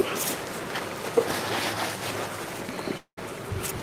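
From 2.97 s to 3.19 s the sound gives way to a smeared, buzzy continuation that fades out, leaving about 90 ms of near silence before the audio resumes with roughly 200 ms of material simply gone. This is most likely a long network dropout, with the receiver stretching the last received sound to cover the gap. On a spectrogram the harmonics flatten into smooth, decaying bands, then a blank strip. The waveform shows a shrinking envelope collapsing to a flat line.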